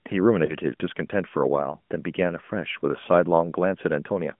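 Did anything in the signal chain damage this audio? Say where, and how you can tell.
Yes. The damage happens on the radio link feeding the mobile codec. Between 0.46 and 0.54 s the speech briefly dips or warbles. This is lost AMR speech frames. The gap fits a single lost 20 ms frame. The decoder filled it by repeating the last good pitch and vocal tract settings at reduced gain. The sound then takes a moment to recover its strength. The line band of about 150 Hz to 3.4 kHz is audible throughout.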